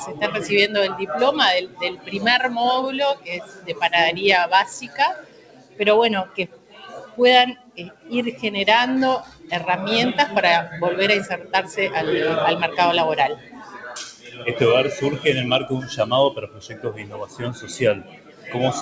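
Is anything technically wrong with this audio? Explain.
Yes. A speech noise suppressor was left on this audio throughout. It treats steady tones and decaying tails as noise, so the level swings by around 15 dB. Attacks survive while sustained parts sink.

There are seven spots of sound cut by the noise suppressor, at 1.64–2.15, 3.15–3.82, 4.85–8.11, 9.24–9.51, 11.38–11.53, 13.36–14.46 and 16.35–18.54 s. Held sound dips by about 10 to 13 dB and tails end early. The level sinks rather than vanishing, which separates this from a dropout.

The band stops at 8 kHz, which fits a G.722 call path at 64 kbps.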